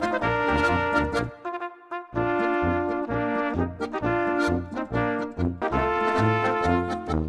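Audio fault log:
5.62 s, stream segment skipped: the audio jumps abruptly forward, with a very brief blip at the join, as though a stretch of the material has gone missing and the sound picks up further along. This is likely a stream segment skipped: one chunk of the segmented stream failed to arrive or load, so the player moved straight on to the following segment. The missing span is never played, and the splice between unrelated points produces the click.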